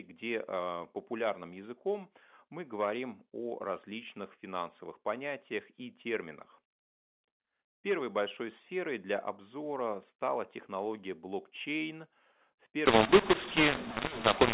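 This telephone speech clip has a mu-law and A-law mix-up from 12.86 s to the end at 14.54 s. Mu-law coded audio is decoded as A-law there. Levels become scrambled. The sound turns harsh and distorted, and quiet moments fill with noise. Before that, the G.711 narrowband telephone coding is audible, with nothing above 4 kHz.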